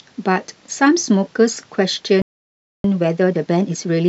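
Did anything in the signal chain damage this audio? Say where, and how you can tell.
Yes. A playback stall cuts the speech off mid-flow at 2.22 s, and the output stays silent until 2.84 s, a gap of about 0.62 s. This points to the playback stage, most likely a player starved of buffered data or a blocked audio thread.

From 2.84 s to the end, time-compressed catch-up runs the speech at about 1.25 times normal speed with its pitch unchanged. The player is removing short segments and cross-fading across the joins to clear the backlog built up during the stall.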